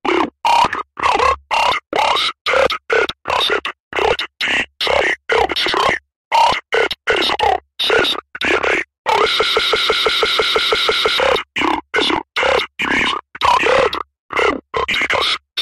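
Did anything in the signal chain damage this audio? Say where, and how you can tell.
Yes. From 9.40 s to 11.18 s the audio turns into a broken-record loop: a fragment about 165 ms long repeats back to back, eleven times, and the material that belonged in that stretch never plays. The stage is likely a stalled playback or stream buffer that kept re-sending its last block. On a waveform the same short shape tiles identically across the span; a spectrogram shows a repeating vertical pattern at a steady 165 ms period.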